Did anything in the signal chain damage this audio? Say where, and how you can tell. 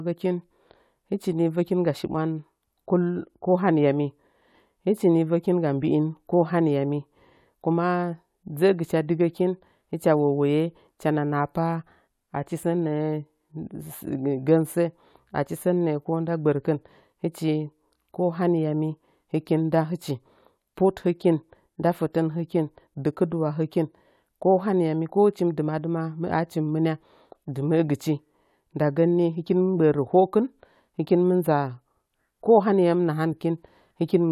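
No, nothing in the chain audibly damaged this recording.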